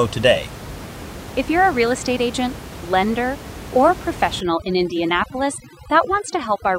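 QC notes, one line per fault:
4.41–6.79 s, overdone noise removal: from 4.41 s to the end, the room noise (about 14 dB below the speech before this point) drops and breaks up into twinkling specks. An over-aggressive reducer is switching off individual frequency bands that sit close to its noise estimate, taking quiet speech detail with them. A spectrogram shows a suddenly black background scattered with isolated bright dots and holes punched through the speech harmonics. The waveform shows a flattened noise floor between syllables.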